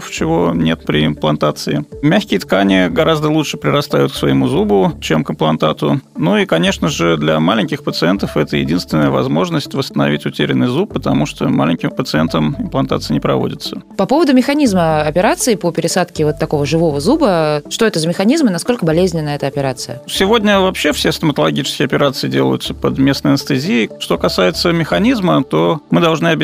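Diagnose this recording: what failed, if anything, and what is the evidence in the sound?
Nothing in the signal points to a failure at any stage, from the wiring and conversion through buffering, processing, transmission and storage to playback.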